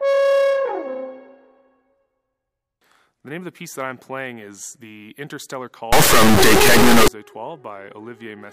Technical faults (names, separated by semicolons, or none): integer read as float